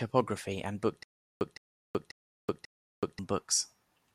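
A speech clip with stutter with silent gaps from 1.03 to 3.19 s: right after "and book", a 162 ms fragment repeats four times, each followed by about 377 ms of dead silence. The cause is likely a stalled stream or player replaying its last buffer.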